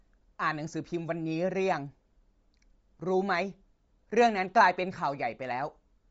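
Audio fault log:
Throughout: Bluetooth LC3 compression, nothing above 7.7 kHz and a grainy, breathy edge on the speech, likely from low-bitrate LC3 filling the top with noise.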